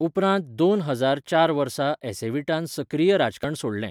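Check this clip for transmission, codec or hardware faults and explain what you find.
One fault stands out near the end of the speech. Damaged data in a compressed stream at 3.43 s: corrupted bytes made the decoder misread the frame, lose sync and hunt for the next frame header, leaving a brief glitch.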